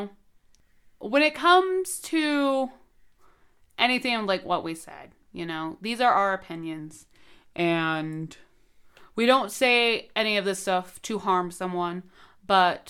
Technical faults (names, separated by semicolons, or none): drift correction step